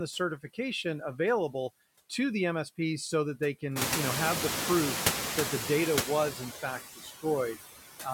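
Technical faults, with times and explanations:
throughout: noise suppressor artifacts. The suppressor works frame by frame. It lowers each frequency band it judges to be steady noise, here by about 15 dB. The background therefore sinks in the gaps and comes back up under the speech. Near 4 s the room noise rises by about 21 dB and settles about 6 dB below the speech. From there on the suppressor has far more to remove, and its gating is easier to hear.
6.62 to 7.25 s: speech cut by the noise suppressor. In this stretch the suppressor mistakes parts of the speech for the louder room noise. It turns them down together with the background, by up to about 16 dB. The affected pieces add up to about a fifth of a second. They sound swallowed or faint against the surrounding speech.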